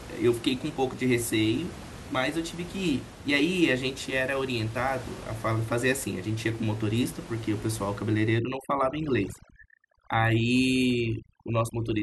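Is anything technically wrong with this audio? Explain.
Yes. From 8.39 s to the end of the clip at 12.03 s there is overdone noise removal. A noise reducer set too aggressively is cutting individual frequency bands whenever they sit close to its noise estimate, taking the quieter parts of the speech with them. The room noise, about 16 dB below the speech before this point, drops and breaks up into twinkling, warbling specks.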